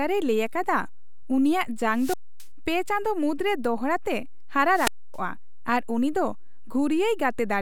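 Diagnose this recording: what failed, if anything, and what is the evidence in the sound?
Two wireless microphone squelch dropouts occur in the radio link, from 1.92 to 2.46 s and from 4.70 to 5.20 s. In each, hiss builds as the FM signal fades, the receiver's squelch mutes the output for about 265 ms, and speech returns.

A DC offset of about -31 dBFS sits under the whole recording, introduced in the analogue front end or converter. It can't be heard as sound, but the waveform is displaced from zero by a constant, costing headroom and showing as steady energy at the spectrum's lowest bin.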